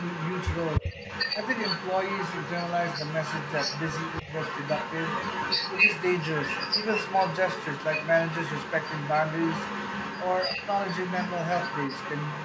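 A second, delayed copy of the speech runs under the whole recording, trailing the original by about 0.29 s and sitting only about 5 dB below it. This is echo leak: the far end was likely on a loudspeaker, and its echo canceller let the pickup pass back down the line. The speech also dips briefly at 0.81 to 0.94 s, losing about 10 dB, and again more lightly at 4.22 to 4.27 s. That pattern is speech suppressed in double talk, where the canceller, likely confused by both sides talking at once, pulled the level down.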